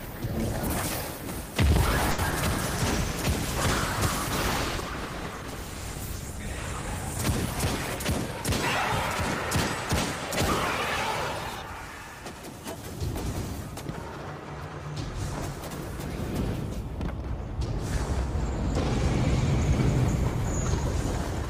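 At 2.11 s a packet arrived late and the jitter buffer ran dry, producing a short stall from a late packet. The receiver held the last sound for about 70 ms, until 2.20 s, then resumed exactly where it had stopped. Nothing is lost, but the sound hangs on unnaturally, with a faint buzz or dip. The playout delay grows by that same 70 ms from here.

Just after, at 2.30 s, 20 ms of audio never reached the decoder, a short concealed packet loss. The receiver continued the preceding sound to bridge the gap and faded back into real audio by 2.34 s. It registers as a brief smear or wobble, and whatever fell inside those 20 ms is simply not there.

From 2.60 s the call's bandwidth estimate dropped, and the encoder was pushed from 32 kbps down to 15 kbps, a call bitrate drop. The lowest rate held for about 4.3 s. With fewer than half the bits, the coding becomes coarse and the top end is trimmed, so the sound turns rough, watery or muffled. 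It brightens again as the rate recovers by 8.20 s.

Between 12.07 and 12.83 s the jitter buffer was holding more audio than its target, and the receiver shortened it with a jitter buffer speed-up. It repeatedly removed slivers a pitch period or so long, roughly 50 ms in total, so playback runs at about 107% speed with the pitch unchanged. The passage sounds slightly hurried and its rhythm tightens for those three-quarters of a second.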